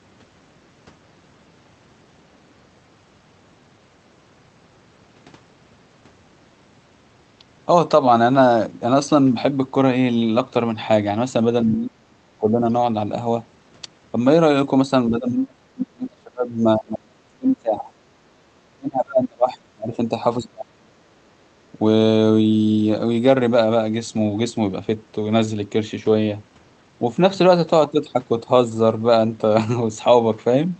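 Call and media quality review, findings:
Speech suppressed in double talk, likely echo canceller unable to separate near-end talker from loudspeaker echo during overlap, so both attenuated. Near-end speech dips by about 30 dB, up to about 35 dB, at 11.64–12.68 s, 15.1–17.86 s, 18.74–20.12 s, 20.38–21.22 s.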